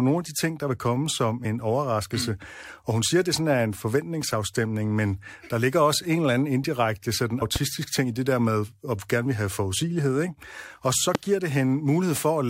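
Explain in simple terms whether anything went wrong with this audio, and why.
Two things go wrong in this speech recording.

At 7.41 s there are compressed frames skipped. The audio is stored in small chunks of about 23 ms each. Here roughly four chunks in a row never get played, so about a tenth of a second is lost. The sound jumps forward.

There are also two loud pops, from 7.56 to 7.58 s and from 11.15 to 11.17 s. Each is a single sharp burst that sits on top of the speech, which carries on underneath. The second pop is the louder of the two. A likely cause is a sudden electrical jolt, such as a plug, a switch or static, reaching the recording.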